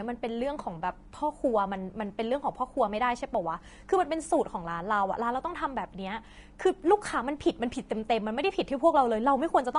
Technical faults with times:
0.00-9.79 Vorbis compression

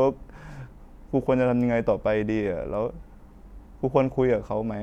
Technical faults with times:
none

